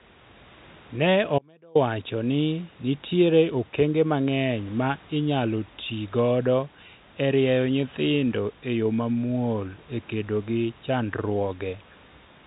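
From 1.39 s to 1.75 s the speech drops out abruptly for about 0.37 s, leaving only a faint residue roughly 35 dB down: an audio dropout to a faint residue, likely from an upstream break while the path stayed live.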